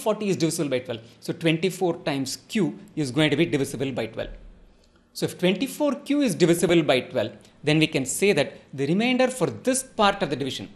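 From the start, the audio sounds dull and granular, with a gurgling edge. This is likely MP2 compression at a low rate, around 80 kbps by the sound of it. Too few bits shut off the upper sub-bands, and the rest are coarsely quantised.

From 6.59 to 6.75 s, DAB burbling breaks through. It is a short burst of noise blips. Bit errors slipped past the error correction into the audio data. Corrupted samples put blips of noise in single sub-bands.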